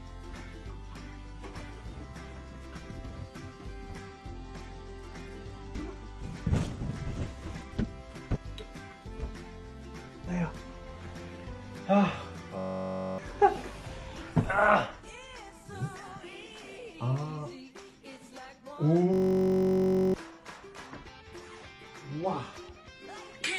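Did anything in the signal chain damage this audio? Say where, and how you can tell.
Yes. Bluetooth SBC bit pool drop, codec stage, 3.98 to 7.88 s. Treble dulls and gritty noise rises. Fits the bit pool falling from 28 to 13, near 102 kbps.

System hang loop, driver or buffer stage, at 12.59 to 13.18 s and 19.14 to 20.14 s. A 21.33 ms fragment repeats as a 46.9 Hz buzz, which fits a 1024-sample ring buffer. Roughly 0.7 s and 1 s of audio are lost.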